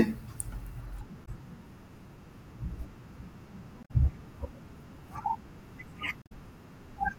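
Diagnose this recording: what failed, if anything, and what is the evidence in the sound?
The codec stage is at fault: this is damaged data in a compressed stream. The speech breaks up three times, at 1.22 to 1.28 s, 3.80 to 3.91 s and 6.19 to 6.32 s, each a short break lasting roughly 70 to 130 ms. That's what you hear when the decoder hits corrupted bytes, misreads or drops those frames, loses sync, and hunts for the next valid frame header before clean playback resumes.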